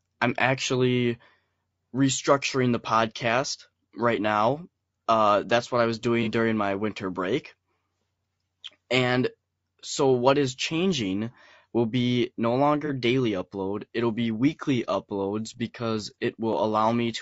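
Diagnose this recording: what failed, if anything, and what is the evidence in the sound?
The codec stage likely used low-delay AAC compression at a bitrate around 32 kbps, leaving the speech rough and grainy throughout, with noise between harmonics.

AAC frame loss with concealment struck at 6.23–6.28 s and 12.86–12.90 s: the decoder patched about 30 ms each time from the previous spectrum, producing brief smeared, noisy patches.

Periodic USB or driver dropouts appear from 14.54 to 16.53 s: the bus or driver stalled roughly every 1.0 s, skipping a few milliseconds of audio three times, heard as regular ticks.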